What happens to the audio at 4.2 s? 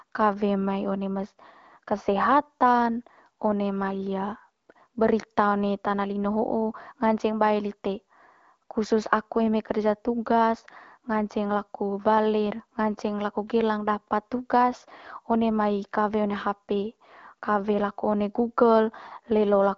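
Nothing goes wrong at 4.2 s: the speech carries on intact through that moment, with only the light coloring of the AMR wideband (HD Voice) codec at 12.65 kbit/s that runs throughout.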